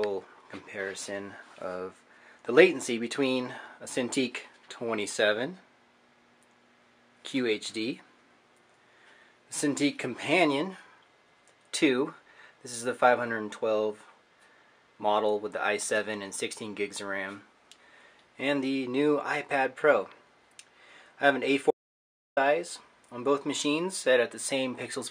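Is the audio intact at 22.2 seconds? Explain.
No. At 22.2 seconds the clip is in an audio dropout to silence running from 21.71 to 22.37 s, a gap of about 660 ms. The sound stops abruptly and resumes just as abruptly, and in between there is silence with no room tone or noise floor. That points to the input being lost, likely through a disconnected device, a failed link or an accidental mute, while the recorder kept writing silence. Whatever occurred during those 0.66 s is gone.

Sample clock jitter also runs through the whole clip. The converter's clock wanders by around a microsecond, so each sample is taken slightly early or late. The resulting error scales with how steeply the waveform is changing and sits roughly 40 dB below the signal. It shows up as a hiss or grit that thickens on loud, bright passages and falls away in quiet ones. Inside the dropout itself there is no signal, so no jitter can be heard there.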